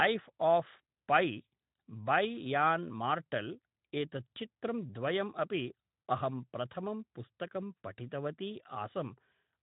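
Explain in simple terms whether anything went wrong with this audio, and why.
No, nothing went wrong with this recording.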